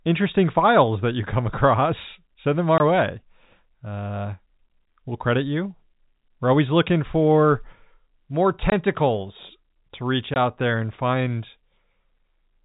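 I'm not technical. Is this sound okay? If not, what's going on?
No, not quite. This is speech, and it has packet loss filled with silence in three places: 2.78 to 2.80 s, 8.70 to 8.72 s, and 10.34 to 10.36 s. Each time, one small chunk of the audio went missing on its way over the network, and the playback just dropped in 20 ms of nothing. You'll hear a tiny hole with hard edges. The sound also has that narrow, phone-line quality of G.711 telephone coding, with nothing above 4 kHz.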